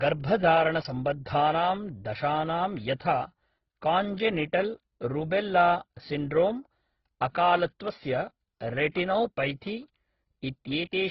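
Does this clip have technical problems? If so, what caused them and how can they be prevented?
Yes. Throughout the speech there is nothing above 5.6 kHz, and the sound carries two overlapping sets of coding artefacts: the earlier codec's artefacts heard together with the later codec's own. This is likely transcoding between lossy codecs, consistent with a low-bitrate AAC encode later re-encoded as Opus at a similar low rate. The second encoder spends its scarce bits reproducing the first one's damage, and the narrow bandwidth persists. To prevent it, encode once from the original source and avoid re-encoding already compressed files.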